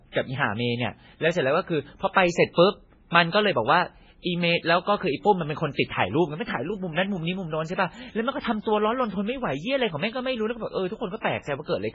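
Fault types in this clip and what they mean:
MP3 compression: The speech sounds watery and swirly the whole way through, with nothing above about 7.6 kHz. That's likely a heavily squeezed MP3, where the encoder drops the treble and lets weak frequency lines flicker between frames, which fits a bitrate around 16 kbps.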